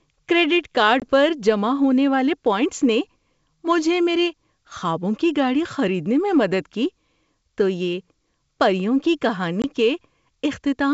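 At 1.00 to 1.03 s, after "کریڈٹ کارڈ", and at 9.62 to 9.65 s, after "تو یہ پریوں کی", packet loss on an ADPCM call drops about 20 ms, roughly one packet, to silence. The waveform shows a flat-edged gap and the spectrogram a vertical blank. Speech resumes slightly distorted while the decoder's predictor resynchronises.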